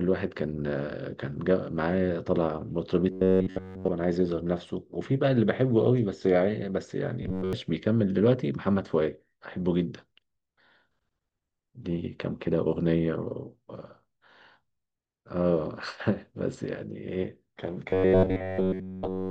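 From 3.12 to 3.89 s, 7.23 to 7.53 s and 17.9 s to the end, the speech becomes a rigid, metallic buzz pitched at 93.8 Hz, almost entirely in the first and last stretches and partly in the middle one. This robotic sound likely comes from repeated short buffers of about 10.7 ms replayed in place of late audio.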